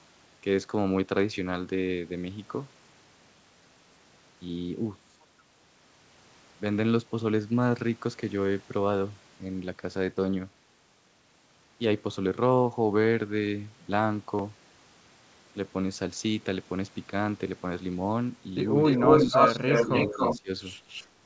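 From 18.84 to 20.4 s there's an echo leak: a copy of the speech trailing about 281 ms behind and even a bit louder than the talker, likely from a loudspeaker echo the canceller missed. Inside that stretch, at 19.25, 19.53, 20.08 and 20.39 s, you get speech suppressed in double talk: short gaps of roughly a tenth of a second where the talker drops by around 10 to 25 dB. The echo comes back faintly from 20.88 to 21.07 s, well below the speech.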